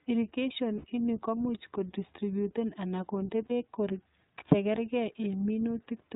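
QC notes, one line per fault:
throughout: iLBC codec. The whole clip is narrowband speech with nothing above 4 kHz, and the codec damage is plainly audible as a rough, slightly synthetic edge on the voice. The sound points to iLBC running at about 15.2 kbps with 20 ms frames, each frame coding its excitation independently. Unlike a lossy wideband codec, the limit here is a hard narrowband ceiling plus a rough, vocoded texture, not smeared or warbling highs.
0.78 to 0.85 s and 3.46 to 3.52 s: lost iLBC frames. Two short dropouts, about 60 ms before "ini komuch kodistributen anan" and about 40 ms after "komuch kodistributen anan kondee", fill in as a held, faintly buzzy or breathy vowel where the decoder repeats the last pitch cycle mixed with noise. This fits three and then two lost 20 ms frames. What sets it apart from a plain gap or a stutter is that the voice snaps back clean almost immediately, since each iLBC frame stands alone.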